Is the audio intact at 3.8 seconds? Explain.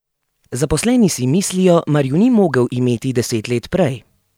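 Yes, the speech runs through 3.8 seconds without any dropout, click, distortion or other fault.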